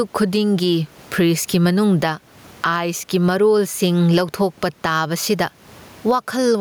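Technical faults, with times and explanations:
Throughout, gain pumping: the input gain is likely far too high, so a fast limiter clamps each loud syllable and releases in the pauses, swinging around 15 dB. The room noise sits about 39 dB below the speech, and the dynamics are squashed.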